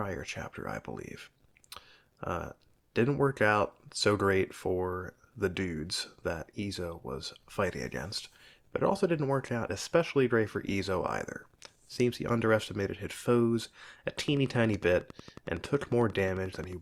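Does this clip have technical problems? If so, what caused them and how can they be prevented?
Yes. A train of clicks runs from 14.19 to 16.74 s: roughly thirty similar pulses at a regular 11 per second, peaking at about the level of the speech. The likely cause is electrical interference or a faulty connection or power supply. Shielded cabling, distance from other equipment, and a stable interface prevent it.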